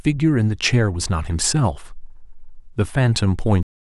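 A cut-off end at 3.63 s stops this speech recording in the middle of a sound. Instead of decaying naturally, the audio drops straight to digital silence, which fills the remaining 0.31 s. The final stretch of audio buffers was never written or played out, so whatever was still sounding is severed abruptly at that instant rather than finishing or fading.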